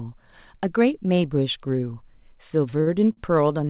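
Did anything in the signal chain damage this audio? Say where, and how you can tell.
Yes, at the network and jitter-buffer stage. There are three short stalls from late packets, at 2.70 to 2.75 s, 2.81 to 2.88 s and 3.12 to 3.19 s, where the sound is held on for 27, 58 and 46 ms with a slight buzzy smear. Nothing's actually lost. The buffer ran dry, the receiver stretched the last sound until the packet turned up, then picked up where it left off, so each stall adds that much delay.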